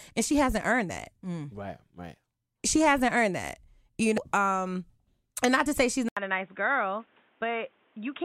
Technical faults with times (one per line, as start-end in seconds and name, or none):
4.17-4.21 damaged data in a compressed stream
6.09-8.25 input switched to a poorer device